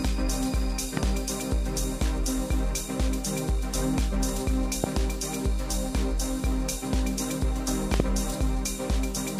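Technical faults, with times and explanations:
0.97–0.99 s, loud pop: a single sharp pop jumps out about 15 dB above the sound, which keeps going underneath. That's likely a quick voltage spike, from a plug, switch, static or driver glitch, that got shaped into a short click.
4.84–4.86 s, loud pop: another single pop, louder at about 20 dB over the sound. Same likely spike mechanism.
7.94–8.02 s, loud pop: two pops in quick succession, peaking around 20 dB up, likely a double glitch.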